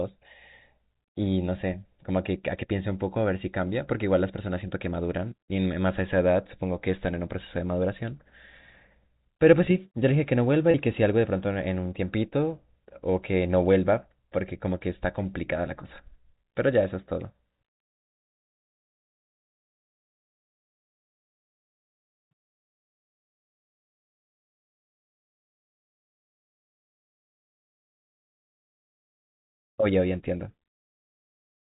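At 10.71 s a packet loss with pitch repetition occurs, lasting about 30 ms to 10.74 s, which fits a single lost packet. The receiver fills the hole by looping the last pitch period it received, so the sound briefly holds with a slightly buzzy, frozen quality. On a waveform the gap shows as identical repeated cycles. On a spectrogram, steady harmonic stripes appear under the 4 kHz ceiling of the G.711 telephone coding.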